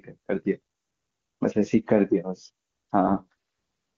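An AMR rate drop runs from 3.08 to 3.34 s, about a quarter of a second near the end of the speech. The AMR-WB stream, clean before this at a rate consistent with 23.85 kbit/s, falls to what sounds like the lowest wideband mode, which fits 6.6 kbit/s. There is no gap and no change in bandwidth, but the voice turns rough, raspy and synthetic. The codec model has too few bits to shape the vocal tract and pulses accurately.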